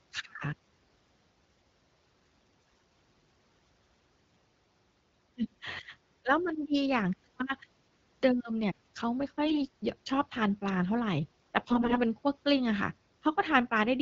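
Three short patches of AMR bit errors turn up, at 2.61 to 2.82 s, 9.46 to 9.63 s and 11.59 to 11.98 s. The speech keeps its rough pitch and level through each, but goes hoarse and gargly. That fits corrupted low-priority frame bits slipping past the checksum, so the pulse positions and the fine gain and spectral values come out wrong. The last burst is a bit milder but lasts longest, against the fairly clean 12.65 kbit/s HD Voice background.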